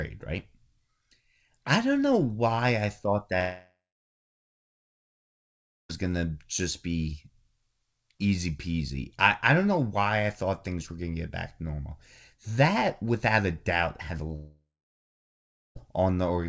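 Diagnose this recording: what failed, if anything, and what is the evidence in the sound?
Long network dropout at 3.40–5.91 s, after "know why I thought", and 14.36–15.77 s, after "a doubt had a". The last sound stretches into a fading buzz, then silence for about 2.1 s and 1.1 s. This is likely network packet loss, briefly concealed by the receiver; the lost speech never returns.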